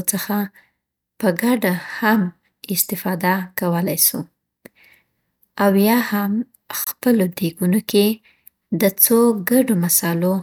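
At 6.84 s, right after "او یا هم", the speech drops out for about 26 ms and then resumes at 6.87 s exactly where it left off. The codec smears the edges of the gap. This is a gap at a join of encoded pieces: the audio was encoded in separate segments and joined without trimming. The encoder's start-up silence and the padding of the final frame were both left in at the seam.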